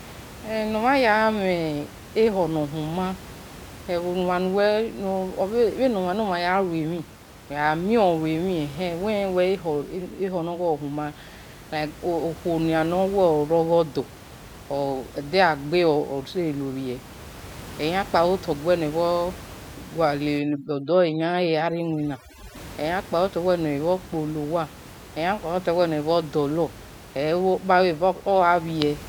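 Overdone noise removal from 20.39 to 22.56 s in this speech clip: an over-strong reduction stage shuts down bands near its noise estimate, leaving twinkling near-silence over room noise about 19 dB down.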